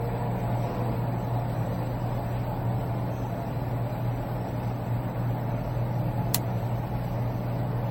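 A recording of everyday sounds that has likely passed through lossy MP3 encoding and decoding about ten times over, which is generation loss. Each pass re-quantised the audio on a shifted frame grid, so the errors stacked up rather than staying at the level one encode at around 60 kbit/s would leave. The result is a swirling, hollow texture with smeared transients and blurred attacks, and nothing is left above 16.5 kHz, giving a dull, band-limited top end. Separately, at 6.35 s an uninitialised buffer was sent to the output before any audio had been written into it, so whatever stale memory it held was played as samples. This is heard as a sharp, loud click-like burst of digital noise lasting about 2.9 ms, a length that fits a 128-sample block, cutting abruptly across the sound.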